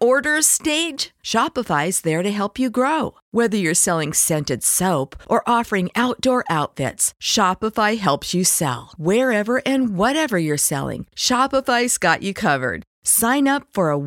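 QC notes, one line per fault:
Nothing stood out on a full listen to the speech.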